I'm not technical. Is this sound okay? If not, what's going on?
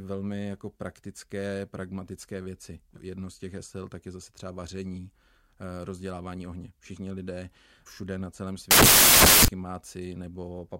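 No. From 8.71 to 9.48 s the speech turns into harsh hiss because of samples built from the wrong bytes. Each tiny slice of digital audio is stored as a couple of bytes, and here the player stitched them together wrongly. The small, fast-jittering details ended up treated as the main loudness, so for under a second you hear loud, harsh noise.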